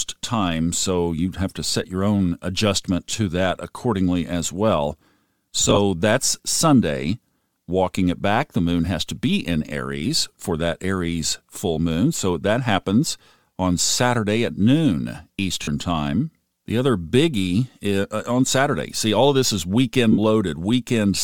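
Lost LE Audio frames occur four times. At 1.83 s, between "so you'd have to" and "your own adjustment to", there is a brief 7.5 ms blip. From 5.60 to 5.78 s, scattered losses smear the speech, with the longest run about 30 ms. After "at noon", at 15.63 to 15.68 s, a 45 ms gap sounds noisy. After "of this is weekend", at 20.12 to 20.19 s, a 60 ms gap turns noisy and fades. The decoder reuses the last spectrum with random signs, so voiced sounds become hiss-like smears.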